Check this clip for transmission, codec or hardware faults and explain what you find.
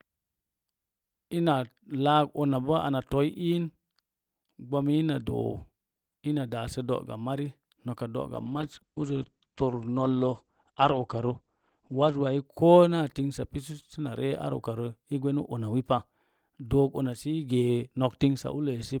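One transmission fault is present: a call bitrate drop from 8.34 to 12.51 s. The encoder is told to spend far fewer bits, which fits a fall from about 32 to 11 kbps. Coding becomes coarse, and the audio band narrows from 20 kHz to 8 kHz. The speech sounds muffled and rough, worst for nearly four seconds.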